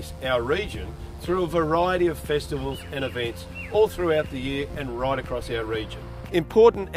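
From the very start to about 4.88 s there's a mains buzz riding under everything, a steady raspy edge built on 60 Hz. Sharp switching spikes twice per cycle stack up harmonics into the kilohertz range. It sits roughly 35 dB below the sound.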